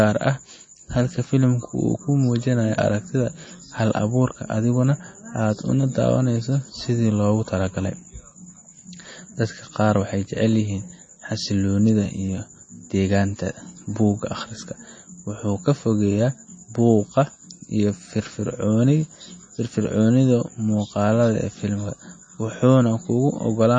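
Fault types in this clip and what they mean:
MP3 compression: likely low-bitrate MP3 (fits about 32 kbps); treble stops near 9 kHz, and weak frequency lines flicker, giving plainly audible watery, swirly speech with smeared consonant attacks.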